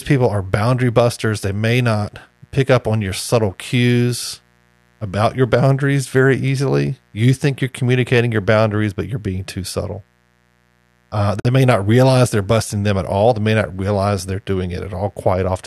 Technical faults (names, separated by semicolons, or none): mains buzz; gap at a join of encoded pieces